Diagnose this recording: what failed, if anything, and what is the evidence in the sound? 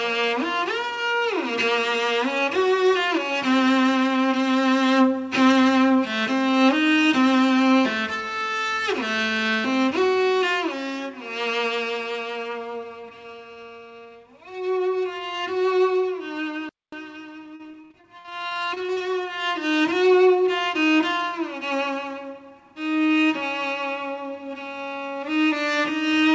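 The playback stage failed first. From 16.69 to 16.92 s the output drops to silence for about 230 ms, then resumes. This playback stall was likely caused by the player's buffer running dry or its output thread being blocked. It differs from packet loss because the gap is not filled with anything. There is no repeated or smeared sound, only a clean hole in the audio.

Shortly after, from 17.56 to 19.02 s, the network and jitter-buffer stage shows repeated packet loss with a robotic sound. Around sixteen separate holes are patched by extending the preceding sound. The longest hole is about 49 ms, and roughly a quarter of that stretch is concealed material rather than real audio. The choppy texture of the repeated fill separates this from a stall. The band-limit at 8 kHz fits the G.722 call codec on this path.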